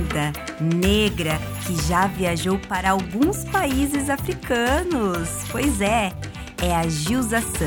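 One channel drops out twice, from 2.70 to 2.86 s and again from 6.09 to 6.17 s. In each span the sound abruptly falls by about 6 dB for 160 ms and then 80 ms before snapping back. That drop is likely caused by one side of a stereo pair briefly going silent: once the two channels are summed to mono, material shared by both loses half its contribution, and anything present only on the lost side vanishes.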